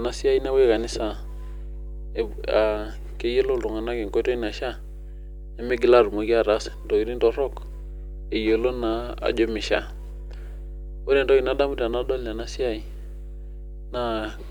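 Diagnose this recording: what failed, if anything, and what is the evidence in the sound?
Mains hum sits under the speech from start to finish. It is a steady low tone at 50 Hz, loud enough to hear between phrases, roughly 10 dB below the speech itself. It does not change with the talker, so it entered before the speech was mixed or captured. The stage is analogue wiring. A ground loop or a nearby transformer coupled the 50 Hz power line into the signal path, and the converter recorded it along with the speech.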